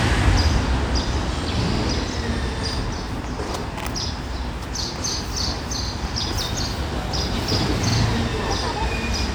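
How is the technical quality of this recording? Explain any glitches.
The recording has a recurring glitch: a brief stutter repeats at regular intervals, at 1.75–1.80 s, 3.80–3.85 s, 5.85–5.90 s and 7.90–7.95 s. Each is a small catch or click, where a 50 ms slice of sound plays twice in quick succession. These are overlapping chunks. The audio was handled in 2-second blocks, and each new block began 50 ms before the previous one had finished, so that sliver is repeated at every join, roughly every two seconds.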